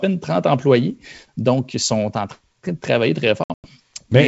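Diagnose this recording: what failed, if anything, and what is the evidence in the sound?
Packet loss on an ADPCM call, at the network stage, between 3.44 and 3.71 s: about 160 ms of the G.722 speech is lost across roughly seven packets, with a longest run of 100 ms. Missing packets become hard-edged silence, and the decoder's adaptive predictor and step size fall out of step with the sender's.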